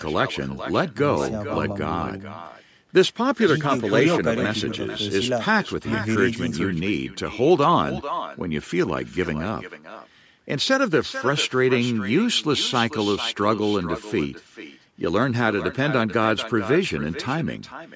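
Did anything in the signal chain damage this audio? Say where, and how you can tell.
Yes, there's echo with no canceller, all the way through this speech clip. Every phrase comes back roughly 400 ms later, about 12 dB down and thin. The far end's speaker is feeding its mic, and nothing in the call processing strips it out.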